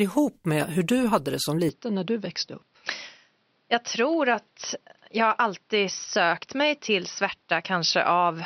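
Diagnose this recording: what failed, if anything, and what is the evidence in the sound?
Input switched to a poorer device at 1.69 s, lasting to the end of the speech. At that point the sound turns dull and boxy with no gap, nothing above 5.9 kHz survives, the level drops a little, and a new, faint background noise appears well below the speech. This points to the driver or device stage, where the system likely swapped to a narrower-band microphone or headset profile with its own response, gain and noise floor.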